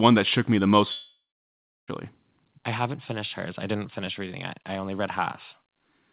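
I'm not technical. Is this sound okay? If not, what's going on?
No. At 0.92 s the speech suddenly smears into a buzzy hiss that fades, then goes quiet for about 0.7 s, and at 1.90 s the speech picks up again with almost a full second simply gone. This is a long network dropout, likely caused by the connection stalling so that no audio arrived. The receiving end briefly stretched the last sound to cover the gap, gave up, and never got back what was lost. The audio also has the narrow, phone-line sound of a WebRTC call path, with nothing above 4 kHz.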